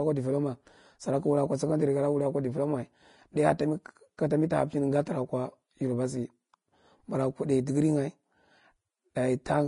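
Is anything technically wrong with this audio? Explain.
Yes. Throughout the speech, nothing is present above 10.5 kHz and the upper band sounds hissy and grainy, likely from Vorbis compression at a low bitrate, roughly consistent with around 31 kbps. The codec coarsely quantised the treble residue, replacing fine detail with noise-like energy and softening consonant attacks.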